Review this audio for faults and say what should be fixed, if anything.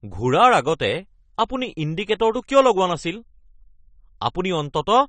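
Throughout the speech there's plainly audible AAC compression damage: nothing above 9 kHz, a dull, smeared top end, and that fizzy, warbly texture on sibilants. It sounds like AAC-LC starved at a low bitrate, likely around 32 kbps, so it's dropping high bands and coarsely quantising the rest. To prevent it, go back to the uncompressed source or re-encode at a much higher bitrate.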